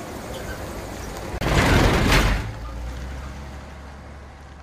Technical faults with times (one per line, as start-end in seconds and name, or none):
1.38-1.41 CD skip